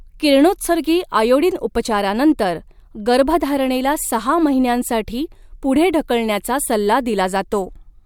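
No technical faults are audible.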